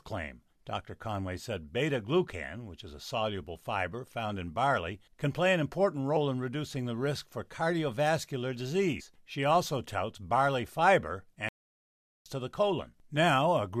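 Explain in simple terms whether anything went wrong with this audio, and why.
Two kinds of fault can be heard in this speech.

Compressed frames skipped: at 6.16 s, between "can play an important" and "in reducing the risk", and again at 9.0 s, just after "the risk for cardiovascular", the audio jumps ahead. About three 23.2 ms frames, roughly 70 ms of sound, never play, leaving a short smeared blip rather than a click.

Playback stall: right after "also touts barley fiber", the sound stops dead from 11.49 s to 12.26 s, a gap of 0.77 s, then picks up at "to the". This is likely the player running short of data or being held up before it recovered.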